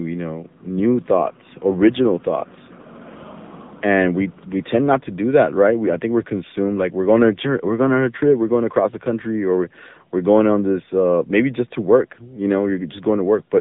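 From start to finish the speech carries AMR narrowband mobile codec damage. Nothing survives above 3.8 kHz, and the band sits at roughly 150 Hz to 3.7 kHz. The plainly audible buzzy, synthetic texture points to a low AMR-NB mode near 8 kbps, where the coder rebuilds the voice from a vocal tract model and a few pulses per 5 ms. That rebuilt texture is what separates it from a plain telephone-band filter, which would narrow the sound without making it synthetic.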